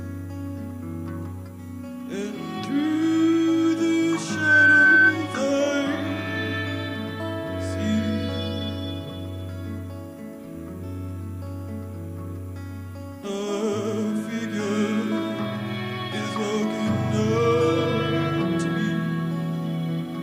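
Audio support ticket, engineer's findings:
Loudspeaker feedback squeal, 4.27–5.16 s: 1.5 kHz tone swelling over about a third of a second to roughly 10 dB above programme. Mic–speaker loop gain exceeds unity there.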